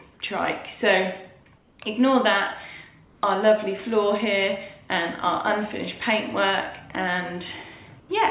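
Comfort noise in place of the background occurs at 1.58–1.79 s, 3.05–3.23 s and 8.0–8.09 s. Each gap swaps the real background for steady, featureless synthetic hiss, about 4 dB quieter, about 1 dB louder and about 1 dB quieter respectively, likely from discontinuous transmission on a band-limited, 4 kHz call path.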